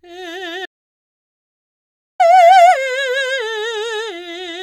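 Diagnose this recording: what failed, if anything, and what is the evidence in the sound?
The music drops out to digital silence from 0.66 s to 2.20 s, about 1.54 s, with no room tone. An audio dropout to silence, likely a lost input link writing zeros.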